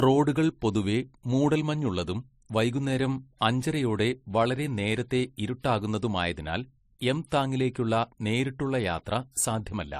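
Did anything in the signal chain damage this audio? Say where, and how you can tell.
Yes, at the codec stage, throughout the speech. The audio carries two different kinds of compression smear at once, the artefacts of one codec heard together with those of another. On a spectrogram there is a hard ceiling with nothing above 15.2 kHz. The likely cause is transcoding between lossy codecs, consistent with a WMA encode around 96 kbit/s re-encoded as MP3 near 42 kbit/s, the second encoder wasting bits on the first one's artefacts.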